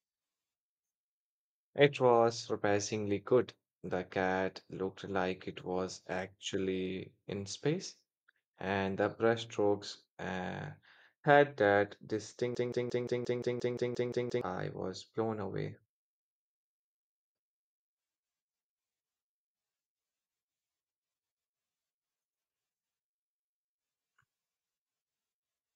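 At 12.55 s, right after "brushstrokes uh had that", a broken-record loop begins: one 175 ms fragment replays identically 11 times until 14.41 s, when "was blown away" resumes. Unlike echo, the repeats never fade. A stalled player likely kept resending its last fragment, so the intervening audio is lost.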